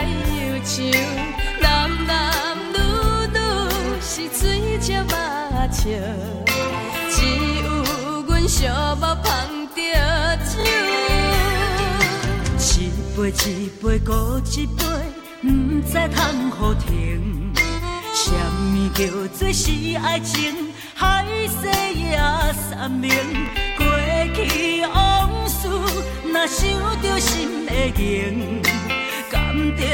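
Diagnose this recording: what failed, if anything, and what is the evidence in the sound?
The failure is a Bluetooth stutter on the wireless link. At 10.61 s the sound catches and repeats a tiny slice for about 43 ms, which fits two lost packets, and at 23.46 s a shorter repeat of about 21 ms fits one. The receiver replayed its last buffer while data was missing, then jumped ahead as if playback had continued. Unlike a dropout, the gap is filled with a buzzy repeat rather than silence.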